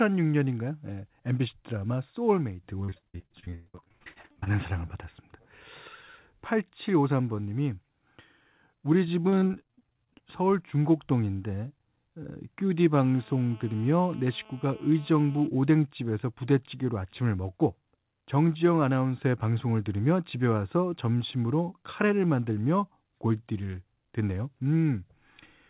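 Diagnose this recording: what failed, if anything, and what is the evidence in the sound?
Network stage: repeated packet loss (robotic sound) from 2.84 to 4.48 s and 9.22 to 10.22 s. Concealment stretches earlier sound over each gap, so speech turns choppy with pieces missing.

Analogue wiring: GSM phone buzz from 12.94 to 15.47 s. A steady, raspy 217 Hz buzz, about 26 dB below the speech, comes from a nearby phone's call bursts being rectified.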